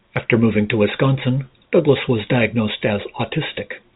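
No technical faults can be heard in the speech. It comes through G.711 A-law telephone coding at 64 kbps, so nothing above 4 kHz is present, and only a faint quantisation hiss rides along with the signal's level.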